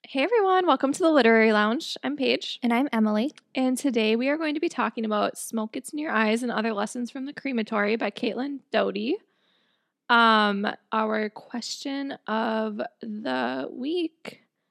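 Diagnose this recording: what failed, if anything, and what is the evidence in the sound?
Nothing in this speech recording points to a failure at any stage of the chain. There is no event in the sound to diagnose, so no mechanism needs explaining.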